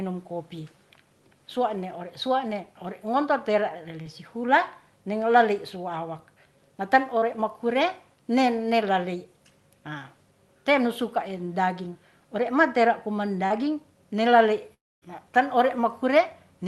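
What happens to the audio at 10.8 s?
Nothing goes wrong at 10.8 s: the speech continues intact through that moment, with no dropout, click or distortion.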